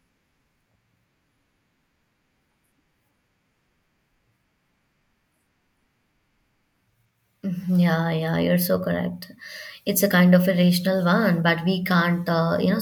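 No technical faults are audible.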